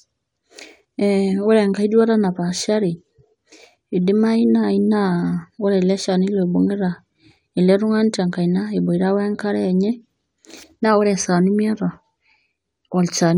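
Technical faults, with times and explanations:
No technical faults can be heard in this speech clip.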